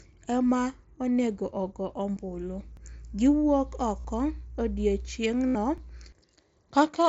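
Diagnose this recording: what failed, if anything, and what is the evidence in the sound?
Two things went wrong here. Over the mSBC wideband link, which carries the speech up to 8 kHz, the headset radio link drops packets and the receiver conceals them. This concealed Bluetooth headset packet loss shows up three times. Right after "ema onego ogo" there's a tiny gap at 2.16 s that the concealment almost completely hides. The longer ones, 4.00 to 4.05 s (45 ms) and 5.48 to 5.55 s (75 ms), turn into a buzzy, steady tone at full level. The phone is looping the best-matching bit of the last 20 milliseconds or so of waveform, and when real audio comes back there's a slight warble.

The second fault is in buffering: overlapping chunks. The audio moves in 3.0 s blocks, and each block starts about 6.5 ms before the previous one ends, so that sliver plays twice at every join. You get a small click or stutter at 2.77 s and again at 5.78 s, exactly 3 s apart. 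That regular spacing points to the chunking rather than the radio link.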